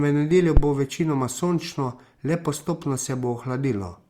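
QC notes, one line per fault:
0.57–0.63 s, phantom power thump: a deep, low-frequency thump lands in the speech and dies away within about 14 ms, leaving the signal as it was. A supply switched on or off at the live input sends a DC step through the coupling capacitors, which shape it into this single low pulse. A plosive pop would follow a spoken consonant, and handling noise would rumble irregularly, but this thump is one clean, electrical step with a quick exponential tail.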